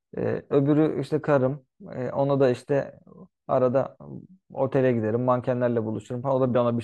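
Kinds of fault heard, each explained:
No technical faults can be heard in this recording.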